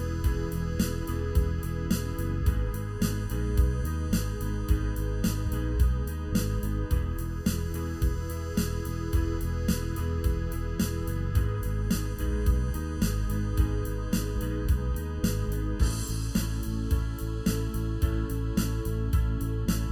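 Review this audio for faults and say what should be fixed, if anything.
Channel delay (comb filtering) throughout: one channel lags by under a millisecond, so the mono sum cancels evenly spaced frequencies from around 700 Hz, sounding hollow. Time-align both channels before summing to mono.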